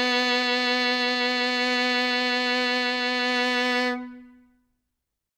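No technical faults are audible.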